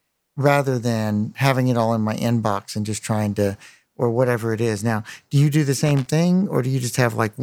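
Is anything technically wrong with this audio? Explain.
Yes. From 5.86 to 6.07 s there's a short burst of loose connector crackle in the speech: a worn or dirty contact is rapidly making and breaking as something moves, chopping the signal, with any DC on the line adding pops. It comes through as irregular scratchy crackle.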